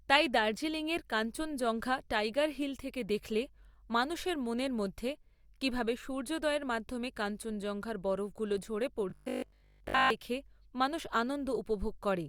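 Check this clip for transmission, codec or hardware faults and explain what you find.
There's one transmission fault, robotic sound from repeated short buffers, from 9.10 to 10.10 s, between "মাধ্যমে কাঞ্চনজঙ্ঘার বরফগুলো ঝরে" and "দেখে মানুষ". The speech turns into a stiff metallic buzz at 50 Hz. Most of that second is replayed material, likely from audio arriving too late and the software looping the last 20 ms or so.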